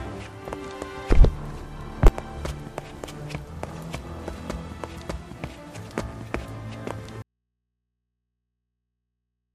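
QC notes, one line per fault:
7.22 s to end, audio dropout to a faint residue: the sound cuts off abruptly and never returns, leaving only a low mains hum roughly 55 dB below the signal. The signal was likely lost upstream while the input stayed live, picking up hum.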